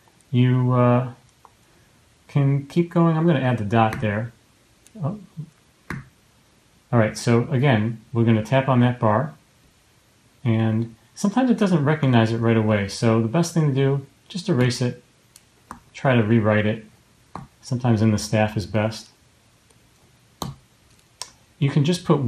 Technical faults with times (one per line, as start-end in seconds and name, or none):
0.00-22.27 MP2 compression